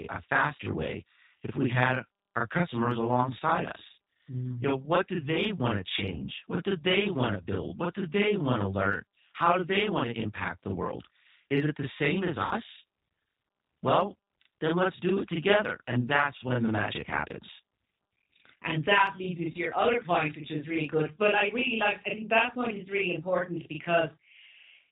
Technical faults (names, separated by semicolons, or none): channel delay (doubling); G.729 codec; VoIP packet loss concealed by the speech codec